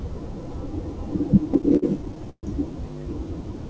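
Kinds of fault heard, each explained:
Repeated stalls (stutter): Between 1.44 and 2.45 s the speech keeps halting in over a dozen short stalls. Packets arrived late, so the jitter buffer ran dry. The receiver stretched the last sound to fill about 310 ms, the longest gap 132 ms. Nothing is lost, but the speech drags.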